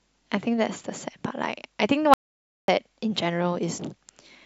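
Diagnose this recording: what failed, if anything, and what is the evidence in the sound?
Audio dropout to silence, 2.14–2.68 s: speech cuts to silence without room tone, likely a lost device or link while recording continued.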